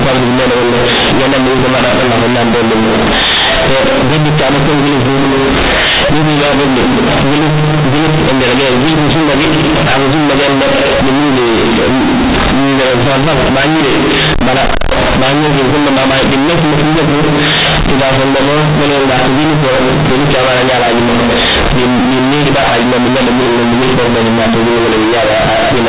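Companded audio read as linear, throughout: the mu-law telephone bytes are played as raw 8-bit samples without expansion, so quiet passages blast as loudly as peaks, giving harsh buzzy distortion and heavy noise in pauses.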